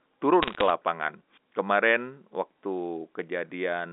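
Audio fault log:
0.42–0.70 s, bit errors on a digital phone line: sharp ticks crackle over the speech as under one percent of bits flip, each corrupting a single mu-law sample.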